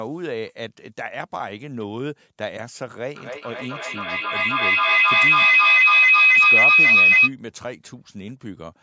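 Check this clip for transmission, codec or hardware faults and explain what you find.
The clip has one fault, a feedback howl. From 3.15 to 7.33 s, a microphone-to-loudspeaker loop gains level each pass, repeating roughly every third of a second and building a tone near 3 kHz about 15 dB above the speech. A spectrogram shows a bright horizontal band below the 8 kHz ceiling of the call processing, and the waveform swells.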